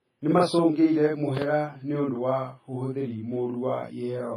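Across the whole speech track, one channel trails the other by about 46 ms before the two are summed to mono, a channel delay (doubling). That gap fits a 2048-sample buffer. Each syllable arrives twice at equal strength, a distinct slapback rather than the comb-filtered hollowness of a shorter offset.

Throughout, the sound is also ringing and washy, with hiss that swells and sinks along with the speech and nothing above 15.4 kHz. This smeared, breathing noise is most likely heavy WMA compression at a low bitrate, around 24 kbps. That smearing over tens of milliseconds separates it from steady broadband noise.

At 0.38–0.40 s a single loud pop lands about 10 dB above the speech, and at 1.37–1.39 s a second, louder one peaks about 15 dB above, just before "nĩũndũ wa ũhũthĩri". Each is a brief voltage spike, likely from a switch or static discharge. The speech runs on unbroken beneath them, unlike a dropout click.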